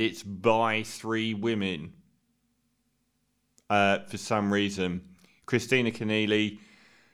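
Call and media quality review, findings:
No audible faults in the speech; nothing to action.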